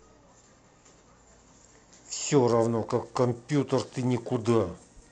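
From 2.49 s to the end, periodic clock jitter appears. The converter clock wobbles at roughly 1 kHz, adding sidebands around the speech. It gives a rough, metallic edge.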